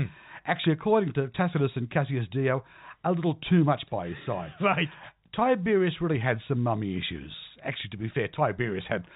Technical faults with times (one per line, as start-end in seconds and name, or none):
none